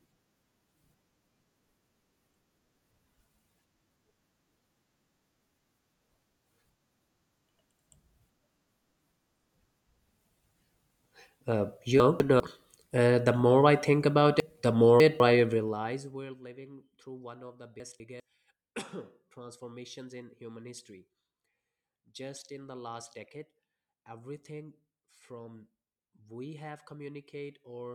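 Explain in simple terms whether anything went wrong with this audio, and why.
A couple of things went wrong in this speech. The first is chunks out of order, which happens three times. Around 12.0 to 12.4 s, a fifth-of-a-second slice of audio shows up one slot too late and plays after the piece that should have followed it. At 14.4 to 15.2 s a slice lands three slots late, and at 17.8 to 18.2 s it's one slot late again. Nothing goes missing, but each time you hear a short jumbled moment.

The second is zipper noise, from about 15.33 to 16.43 s. The volume comes down a long way there, but instead of gliding it drops in small steps, roughly twenty a second, with nothing to soften each one. Every step adds a tiny tick, so you hear a fast ticking, zipping texture riding on the sound while it fades.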